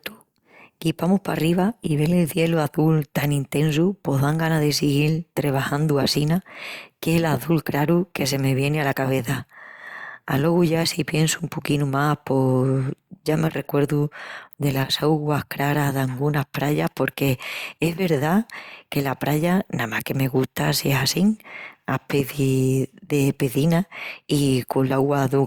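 No dropouts, clipping, glitches or other technical faults turn up anywhere in the recording.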